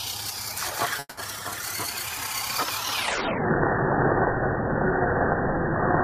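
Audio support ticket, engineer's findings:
Call audio freeze, 0.99–1.19 s: fading fill for 180 ms, ending in 30 ms silence; audio resumes with nothing lost but 180 ms late. Likely jitter-buffer underrun from delayed packets.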